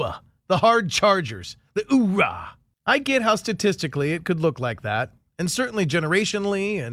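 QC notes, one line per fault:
No faults were heard in this speech clip. Nothing in it calls for a QC entry.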